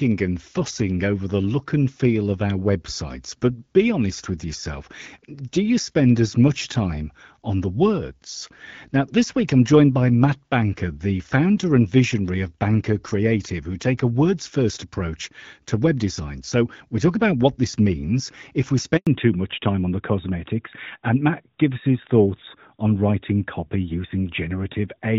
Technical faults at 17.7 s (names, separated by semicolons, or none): none